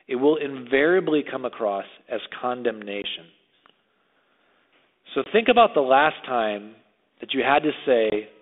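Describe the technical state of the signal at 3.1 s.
Packet loss on an ADPCM call: a 20 ms silent gap from 3.02 to 3.05 s, with the decoder's predictor and step size out of step, leaves the speech slightly distorted at resumption.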